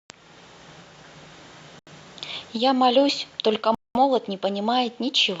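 It's a speech recording with two dropouts where the sound cuts to dead silence and then carries on: first at 1.79 s, about 78 ms of nothing through 1.88 s, then a longer gap from 3.75 s to 3.96 s, roughly 205 ms. That pattern is most likely a Bluetooth stall, where interference held up packets, the headphones' buffer emptied, and playback sat waiting until the resent data showed up.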